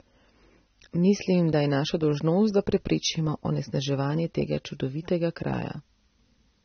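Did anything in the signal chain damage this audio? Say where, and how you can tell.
Yes, at the codec stage: throughout, the speech sounds dull, and a spectrogram shows nothing above 6.3 kHz, the mark of likely AAC compression near 24 kbps.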